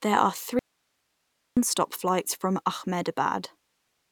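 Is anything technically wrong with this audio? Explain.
Yes. From 0.59 s to 1.57 s the speech cuts out abruptly for about 0.98 s, returning just before "flights from". This is an audio dropout to a faint residue. The gap is not silent: it holds steady hiss about 50 dB below the speech level. That points to the signal likely being lost upstream while the rest of the chain stayed live. The hiss separates it from a true digital mute, and the hard edges separate it from a natural pause or fade.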